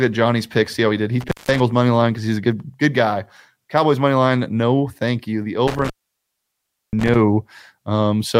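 Intermittent contact: a loose cable or plug opens briefly, near 1.21–1.60 s (gap about 174 ms) and 5.67–7.15 s (gap about 1.03 s), so the speech cuts out with crackle at each edge.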